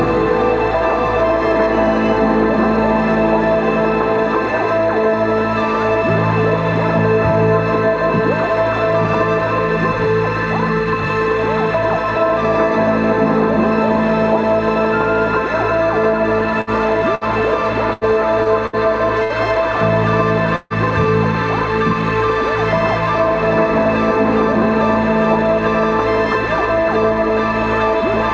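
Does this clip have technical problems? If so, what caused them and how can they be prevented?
Yes. Bursts of packet loss occur at 16.61–16.70, 17.15–17.24, 17.93–18.04, 18.66–18.76, 19.24–19.33 and 20.56–20.73 s. Each time, the receiver stretches the last sound into a fading buzz or hiss for 60 to 144 ms and then jumps ahead, so that stretch of audio is lost. On a spectrogram each burst shows as smeared horizontal streaks that end abruptly. The longest, at 20.56 s, also contains a brief silent dip in the waveform.

A short concealed packet loss at 18.43–18.48 s leaves a quick smear or wobble of roughly 20–30 ms, visible as a small blurred patch in the spectrogram.

Through all of this, the call path shows nothing above 8 kHz, which fits G.722 at 64 kbps.

Prevention: give call traffic network priority and use a larger adaptive jitter buffer or forward error correction, so that late or lost packets can be recovered.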